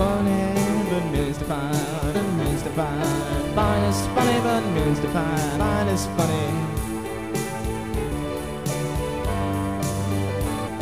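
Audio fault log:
2.14 s, 5.55 s, 8.11 s and 10.66–10.68 s, damaged data in a compressed stream: four short blips, each roughly 15 to 25 ms long, cut sharply into the sound at gaps of about 3.4 s, 2.6 s and 2.6 s. Each one marks a stretch where the compressed data was corrupted. The decoder could not read those frames correctly, lost its place in the stream and produced a brief glitch until it found the next valid frame header and resynchronised.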